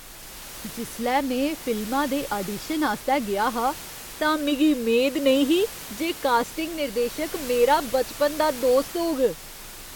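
Nothing in this speech clip points to a technical fault; the only thing underneath is some ordinary room noise, sitting about 15 dB below the speech.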